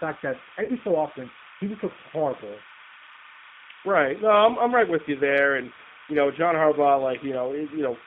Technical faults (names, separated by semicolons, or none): timecode bleed; G.729 codec; VoIP packet loss concealed by the speech codec